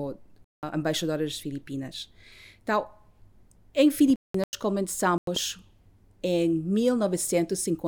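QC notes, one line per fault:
0.44–0.63 s, 4.08–4.53 s, 5.18–5.37 s: corrupt frame muted. Damaged compressed frames were rejected by the decoder and replaced with silence, so the speech drops out abruptly before "embaixadora das" and twice later. The 0.19 s and 0.45 s gaps fit multiples of roughly 90 ms frames. Timing is preserved. On the waveform each gap is a flat silent block with sharp edges. On the spectrogram each is a blank vertical band.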